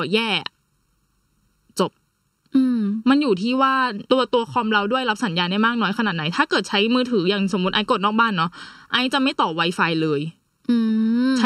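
Throughout the speech, one channel arrives late by around 0.7 ms before the two are summed to mono. This channel delay causes comb filtering: shared content cancels at evenly spaced frequencies from near 700 Hz upward, leaving a hollow, phasey sound with fixed notches.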